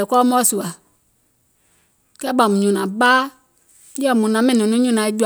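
No technical faults turn up anywhere in this speech recording.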